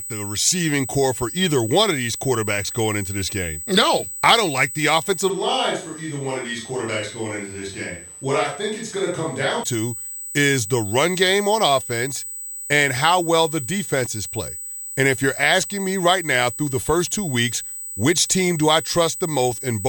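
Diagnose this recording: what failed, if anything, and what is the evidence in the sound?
USB whine runs through the whole recording as a steady 8 kHz tone, strong at roughly 10 dB below the speech. This is an analogue wiring fault: current drawn in USB 125-microsecond microframes leaks through the shared power or ground into the audio path.

A switch to a distant microphone happens from 5.3 s to 9.63 s, after "I don't like the" and ending just before "to is the run". The speech turns roomy, hollow and thinner in bass, drops by about 5 dB, and room noise rises to roughly 35 dB below the speech. The likely cause is that the close microphone failed, leaving a farther one.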